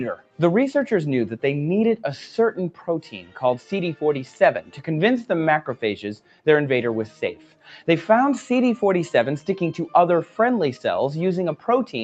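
A noise suppressor applied to music or sounds runs throughout, treating held tones and tails as noise and pulling them down by roughly 10 dB, so the sound pumps and thins. Sound cut by the noise suppressor is heard at 0.16–0.39 s, 2.71–2.88 s, 3.17–3.38 s, 4.62–4.82 s, 6.17–6.47 s and 7.08–7.69 s, sinking by about 9 to 12 dB as sustained or fading parts are clamped. The call path's Opus coding leaves nothing above 8 kHz.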